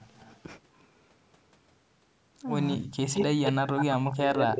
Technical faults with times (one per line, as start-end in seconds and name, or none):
0.13-0.41 echo leak
2.76-2.99 speech suppressed in double talk
3.13-3.85 echo leak
3.78-4.59 speech suppressed in double talk
4.38-4.44 echo leak